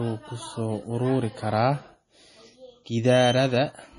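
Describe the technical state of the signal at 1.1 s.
At 1.1 s the speech carries heavy damage that likely comes from MP3 compression, present throughout the clip. It fits a starved bitrate near 32 kbps: a hard cutoff at 10.9 kHz, with watery, swirling texture and smeared attacks as weak frequency lines flicker. A spectrogram shows a flat ceiling and patchy, blinking high bands.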